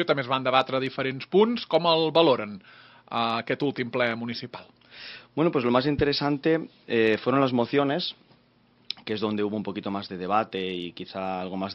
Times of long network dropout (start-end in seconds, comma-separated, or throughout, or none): none